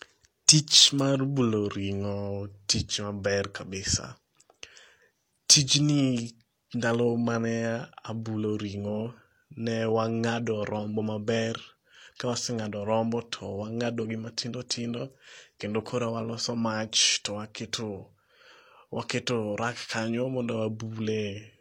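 From start to finish the speech carries the marks of low-bitrate audio saved at a high bitrate. The likely cause is an earlier low-rate HE-AAC encode, consistent with roughly 32 kbit/s, later re-encoded as MP3 at a much higher rate, around 192 kbit/s. The second encode cannot restore detail the first one discarded, so the coarse, smeared quality of the original low-rate coding stays audible throughout, despite the larger file.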